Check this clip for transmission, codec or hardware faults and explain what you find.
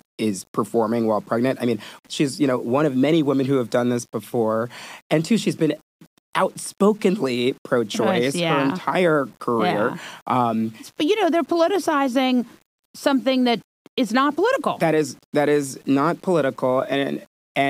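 One fault runs through the whole speech clip: low bit depth without dither. Quiet passages and decaying syllables turn gritty, and the faintest sounds sputter or drop to silence. The cause is likely coarse quantisation, which fits 8-bit rounding with no dither. The error follows the signal, so the grain moves with the speech. It sits roughly 35 dB below the signal. A waveform zoom shows visible staircase steps, and a spectrogram shows signal-shaped hash instead of a steady noise floor.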